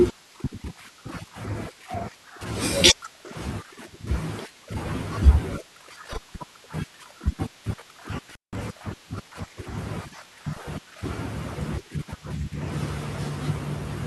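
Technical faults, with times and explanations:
8.29 to 8.56 s, intermittent contact: partway through the speech the signal drops out abruptly, with a burst of crackle as the connection breaks and again as it returns. The line stays open for about 175 ms, and during that gap only a faint hiss remains where the speech should be. This is what a loose plug or cable does when its contacts separate for a moment: the signal path is physically broken, and the rough, rapidly changing contact resistance at each edge produces the crackle.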